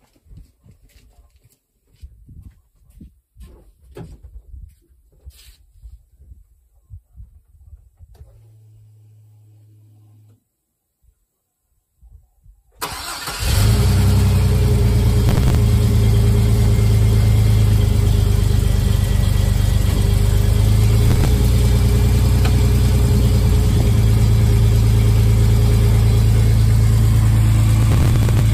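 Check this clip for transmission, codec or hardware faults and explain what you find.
There are three bursts of processor overload crackle, at 15.29 to 15.57 s, 21.09 to 21.28 s and 27.83 to 28.40 s, the last and longest near the end. Each sounds like gritty, tearing crackle over the audio. The processor missed many buffer deadlines in a row, and each missed buffer was skipped, leaving a tiny hard-edged gap. The rate of clicks fits buffers of around 10 ms, with dozens dropped in the final burst.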